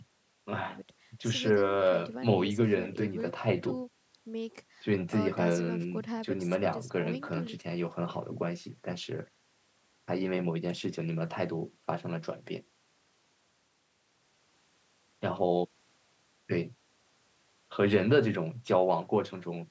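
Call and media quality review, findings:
Nothing stood out on listening to the speech, which carries the expected call microphone processing with no content above 8 kHz.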